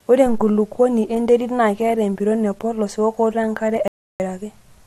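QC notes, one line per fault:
3.88–4.20 s, audio dropout to silence: right after "epolos weokotoo enkare" the speech just stops dead for about 0.32 s of silence, no room tone at all, then picks up mid-flow. Likely the input dropped out briefly while recording carried on.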